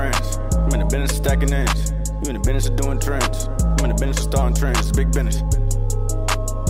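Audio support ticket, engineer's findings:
No faults found on listening; no dropouts, clipping, distortion or timing anomalies identified, so no component action required.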